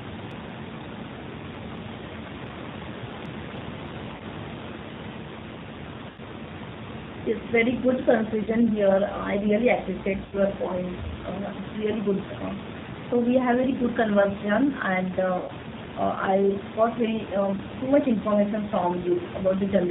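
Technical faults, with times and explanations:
Throughout, G.729 codec: the 8 kbit/s G.729A coder rebuilds speech from a vocal-tract filter and sparse pulses, cutting everything above 4 kHz and leaving a plainly rough, synthetic edge.
4.16–4.23, 6.10–6.20, 8.42–8.48 after "very good", 10.26–10.36 after "really appreciate", 15.38–15.51 after "conversation and", VoIP packet loss concealed by the speech codec: 40 to 100 ms of packets went missing, so the decoder stretched its last pitch and filter into a fading buzzy tone or coloured noise. The voice stays weak briefly afterwards.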